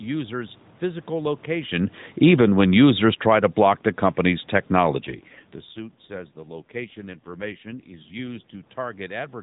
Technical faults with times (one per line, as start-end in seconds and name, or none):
2.08-3.56 automatic gain falling
4.98-8.66 AMR rate drop